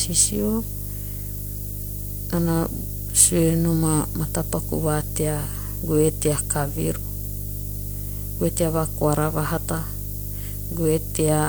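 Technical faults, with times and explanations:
Throughout, mains hum: a steady low tone at 50 Hz with a few low harmonics sits under the speech, loud at roughly 10 dB below it. The power line is coupling into the signal. Unlike rumble or wind, it holds one fixed, unwavering pitch.
Throughout, low bit depth with noise shaping: a constant thin hiss, roughly 10 dB below the speech, rises steeply toward the top of the band. This fits about 7 bits with the rounding error pushed upward in frequency. Unlike flat broadband noise, the low end stays comparatively clean.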